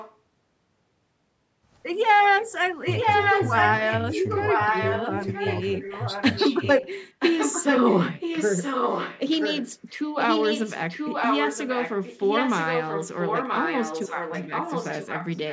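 A delayed copy of the speech trails the talker by almost a second (981 ms). It is faint at 0 to 0.17 s, about as loud as the speech itself from 2.82 to 3.98 s, and slightly quieter than the speech from 4.16 to 8.01 s and from 8.2 s to the end. This echo leak likely comes from a loudspeaker on the far side whose echo canceller let the returning audio through.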